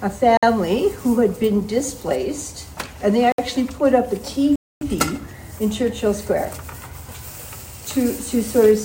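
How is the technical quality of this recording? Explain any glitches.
Three blocks of digital silence break up the recording, at 0.37–0.43 s (56 ms), 3.32–3.38 s (63 ms) and 4.56–4.81 s (256 ms). In each, a run of samples has been replaced by zeros, as when the output buffer is not filled in time. The sound drops out and returns abruptly. The two short gaps register as short holes and the longer one as a clear hole. A waveform shows flat, near-silent stretches, and a spectrogram shows blank vertical bands.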